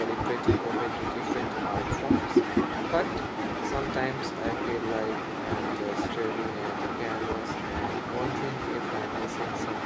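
A speech clip with no technical faults. It has been through a call's microphone processing, so the lowest bass is trimmed away and nothing reaches above 8 kHz, which is how that path normally sounds.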